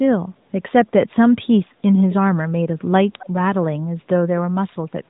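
A far-end echo canceller likely let part of its loudspeaker pickup through, so this speech recording carries an echo leak: brief, faint copies of the voice, delayed by about 263 ms and roughly 20 dB below it, surface at 2.10–2.14 s and 3.19–3.28 s, above a narrowband mobile-codec band that stops near 3.8 kHz.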